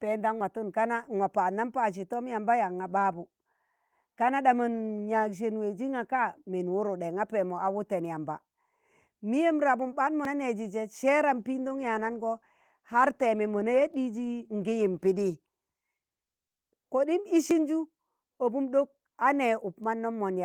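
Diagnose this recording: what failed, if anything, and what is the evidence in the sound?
Small forward jumps in the speech occur at 0.41 s, 10.25 s and 17.51 s, with no gap of silence. Roughly 20 ms goes missing at the first and last, about 40 ms at the second. At the driver or buffer stage, the likely cause is a dropped buffer (overrun), where unread capture data was overwritten and the two sides were spliced together.

From 11.38 s to 15.93 s the speech turns coarse and somewhat muffled, then clears. This is a call bitrate drop at the codec stage, driven by the network's bandwidth estimate. The encoder fell from 32 to 18 kbps, holding the lowest rate for about 4 s, and coded the speech more crudely with less high-frequency content.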